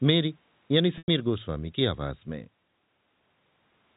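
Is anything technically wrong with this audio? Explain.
Yes. From 0.98 to 1.08 s the speech suffers packet loss with pitch repetition. About 100 ms of audio is missing, which fits ten 10 ms packets. The receiver fills the hole by looping the last pitch period and fading it over roughly 50 ms, so the sound becomes a brief buzzy, held tone that sinks into silence before speech cross-fades back. A waveform shows identical repeating cycles shrinking to a flat line. A spectrogram shows steady horizontal harmonics, then a blank gap, all below the 4 kHz ceiling of the telephone-band coding.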